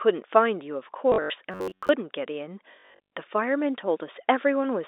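At 1.1 to 1.3 s comes packet loss with the last packet repeated. About 140 ms of audio is missing across 200 ms, with the longest gap 80 ms. The receiver replays the last packet to fill each hole. The runs buzz at about 50 Hz, which fits 20 ms packets. It sounds like a brief robotic stutter.

From 1.52 to 1.89 s, a robotic sound from repeated short buffers takes over. A tone near 94 Hz is imposed on the speech, which fits a buffer of roughly 11 ms being replayed. Most of the real audio in that stretch is skipped. The result is a rigid, metallic buzz that loosely tracks the speech. Audio arriving too rarely is the likely cause.

At 2.72 to 3.1 s, the packet loss returns and is heavier. About 280 ms is lost across 400 ms, and the longest gap is 100 ms. The same repeated packets give a 50 Hz buzz, stuttering for longer this time. All of this sits within the narrow 300 Hz to 3.7 kHz band of G.711 telephone coding.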